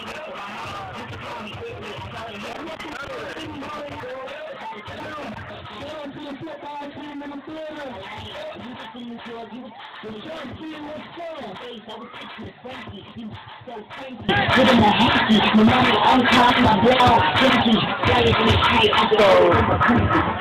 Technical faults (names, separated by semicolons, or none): one channel inverted; chunks out of order